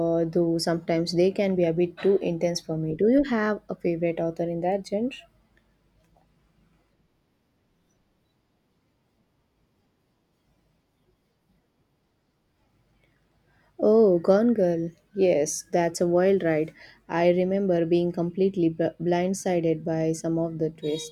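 No technical faults are audible.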